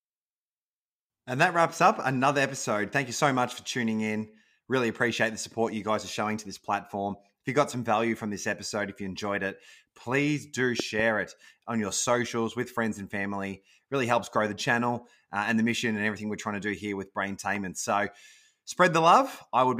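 A double loud pop, well above the speech, hits at 10.80 to 11.02 s, just after "enjoyed it please do" and before "it on your socials". A single, softer pop follows at 17.56 to 17.58 s after "to do here with". The speech carries on under both. Each is likely a sudden voltage spike, from a plug, switch or static discharge, added to the signal.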